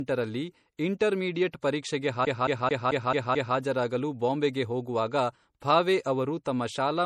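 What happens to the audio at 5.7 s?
At 5.7 s, as throughout the clip, the speech has nothing above 14.6 kHz, a flat ceiling across the spectrogram. This is likely low-bitrate audio saved at a high bitrate: a roughly 48 kbit/s MP3 re-encoded at a higher rate keeps the first encoding's cut-off and smeared, swirly detail.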